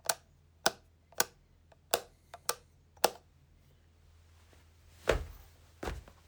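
No technical faults can be heard anywhere in this recording of sounds.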